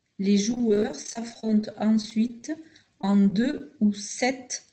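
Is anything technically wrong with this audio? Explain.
Yes. There is repeated packet loss (robotic sound) from 0.51 to 2.43 s and from 3.01 to 3.61 s. Gaps of up to 28 ms recur, and each is patched by extending the previous sound, so about a fifth of each stretch is concealed. The result is choppy speech with pieces missing, heard through a call path band-limited to 8 kHz.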